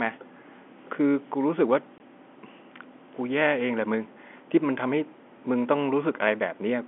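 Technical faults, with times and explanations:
1.98 to 2.00 s, packet loss filled with silence: a 20 ms hole cuts through the speech, which fits a single lost 20 ms packet. The receiver had nothing to play for that slot, so it inserted pure silence rather than concealing the gap. The speech stops dead and restarts abruptly. Around it, the G.711 telephone coding keeps the narrow line band, roughly 250 Hz to 3.4 kHz.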